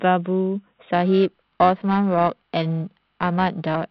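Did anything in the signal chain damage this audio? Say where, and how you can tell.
Yes, periodic clock jitter at the converter from 0.93 s to the end: a clock wobble around 1 kHz puts sidebands on the speech, giving it a rough, metallic edge.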